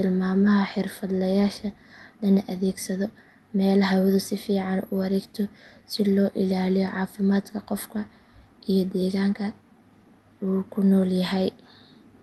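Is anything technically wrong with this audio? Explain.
No, nothing technically wrong stood out on listening to this speech clip.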